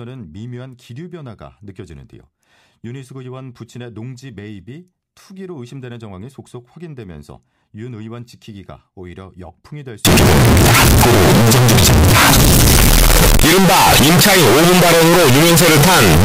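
From 10.05 s to the end, the speech becomes loud, harsh distortion with no quiet passages, likely signed and unsigned mixed up in 16-bit samples.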